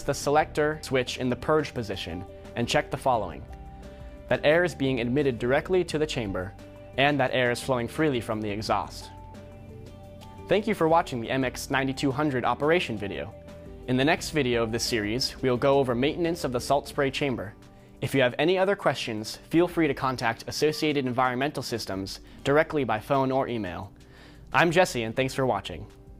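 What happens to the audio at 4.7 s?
Nothing goes wrong at 4.7 s; the audio plays through that moment intact, with no dropout, click or other fault.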